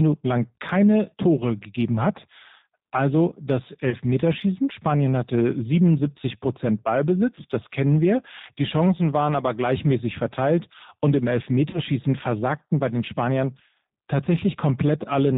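It's a speech recording squeezed through the G.729 codec, and you can plainly hear it. Everything above 4 kHz is gone, and the voice comes out a bit rough and synthetic, which fits an 8 kbit/s G.729 stream rebuilding speech from a filter and pitch model. There are also two patches of VoIP packet loss concealed by the speech codec, at 3.89 to 3.96 s and at 11.70 to 11.79 s, the second falling between "gleichmäßig verteilt und im" and "versagten bei den". In both places the decoder stretches the last bit of voice into a buzzy tone or coloured noise that fades, to cover about 30 ms of missing audio, which fits three dropped 10 ms frames. The sound stays weak and smeared briefly afterwards while the decoder recovers.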